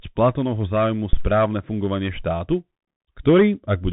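Bluetooth CVSD headset codec, throughout the speech: the audio passed through the narrowband headset link, where each sample is coded as a single up-or-down bit and the step size keeps adapting to follow the waveform. The sound fits a 64 kbps CVSD stream. Nothing reaches above 3.8 kHz, so the speech sounds boxed in. The codec damage is plainly audible: sibilants turn scratchy, loud bright passages smear where the step can't keep up, and a grainy hiss sits beneath everything.

Phantom power thump, from 1.13 s to 1.30 s: a supply was switched on or off on the live input, and the sudden voltage step travelled through the coupling capacitors into the signal. It comes through as a deep, dull thump that dies away within about 38 ms, with the disturbance spanning roughly 0.17 s in total. It lands just before "fungovanie štátu", so that phrase follows right on the heels of the low knock.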